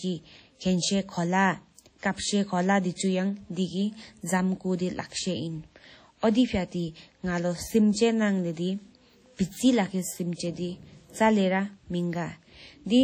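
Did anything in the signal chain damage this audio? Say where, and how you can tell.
Yes. The damage sits at the codec stage and runs through the whole speech clip. The sound rings and smears, with a washy quality. A hiss rises and falls with the signal. Quiet detail drops out rather than fading smoothly. These are the marks of heavy transform-codec loss, likely WMA compression at a low bitrate, which fits about 32 kbps. Coarse quantisation spreads noise across long blocks and zeroes weak components, even though content still reaches about 20.1 kHz.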